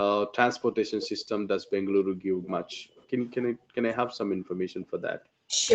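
A speech recording passed through a call chain whose audio stops at about 8 kHz, and its problems come from the echo canceller. From 1.02 to 1.24 s a faint, delayed copy of the voice trails the talker by 340 ms, sitting roughly 20 dB below the speech. A second, weaker copy at the same 340 ms lag appears from 2.43 to 3.01 s, roughly 30 dB down. This is likely an echo leak: the far end was playing on a loudspeaker, and its echo canceller let part of that playback through the microphone and back into the call. The fixed 340 ms delay points to a single consistent acoustic loop.

The room background is also repeatedly gated by the echo canceller. The canceller pulled the microphone down hard while the loudspeaker was active, so the ambience sinks and then returns. From 1.63 to 3.18 s it dips by up to about 24 dB, for roughly a second in total. From 3.50 to 3.76 s it drops by about 40 dB for a few tenths of a second. 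From 4.26 to 5.03 s it drops by about 40 dB again, for around 0.7 s.

Between 5.45 and 5.54 s the talker's own voice briefly cuts out almost completely, for about a tenth of a second. This is likely speech suppressed in double talk: both sides spoke at once, the canceller could not separate the local voice from the loudspeaker echo, and it attenuated everything.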